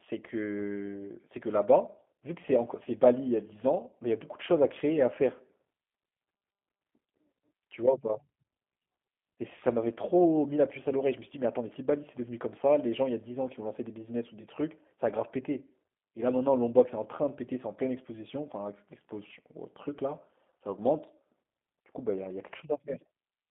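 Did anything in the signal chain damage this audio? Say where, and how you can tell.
Yes, at the codec stage: G.729 coding runs throughout. The speech sits in a 150 Hz to 3.5 kHz band with a rough, synthetic buzz, consistent with an 8 kbit/s model that rebuilds each 10 ms frame from a filter, pitch predictor and sparse pulses. Plain band-limiting would not add that roughness.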